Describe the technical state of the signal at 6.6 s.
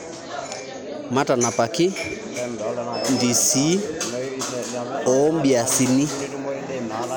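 At 6.6 s the speech signal is intact, with no technical fault to be heard at that moment.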